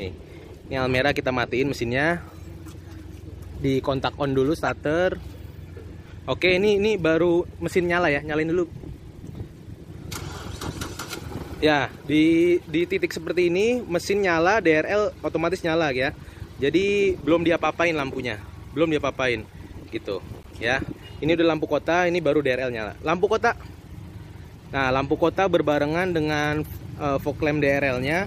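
Short chirps and noise bursts cut in at 4.66–4.71 s, 12.61–12.64 s and 20.43–20.46 s. The first is loud and the later two are faint. These are corrupt frames decoded: flipped bits in a few compressed frames sent energy to the wrong frequencies.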